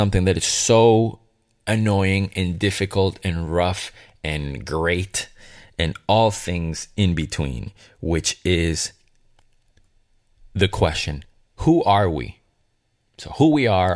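Listening to this speech recording, nothing technical stood out at any point.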